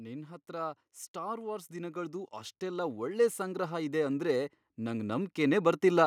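A speech recording with automatic gain rising: from 0.46 s to 6.02 s the gain control judged the input too quiet and climbed about 12 dB, so voice and background swell together steadily.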